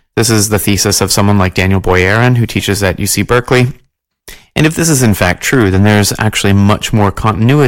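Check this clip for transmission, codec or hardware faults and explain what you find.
Hard clipping runs through the whole recording. The speech is driven about 12 dB past what the stage can pass, so roughly one sample in twenty is cut flat at the ceiling. Those squared-off peaks add high harmonics, heard as harsh fuzz on every louder syllable.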